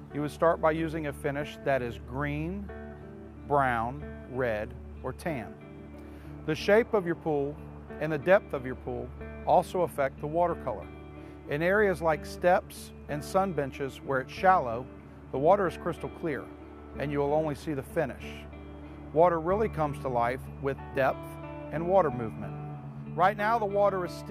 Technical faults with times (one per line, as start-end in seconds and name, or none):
none